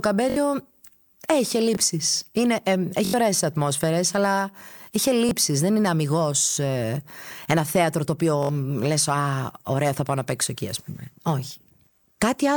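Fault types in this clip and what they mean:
Repeated buffer at 0.30, 1.75, 3.05, 5.29, 6.51, 8.43 and 11.22 s: with new audio late, the device replayed its last 21 ms block, fitting a 1024-sample buffer, one to four extra times, heard as hard-joined stutters or short buzzes.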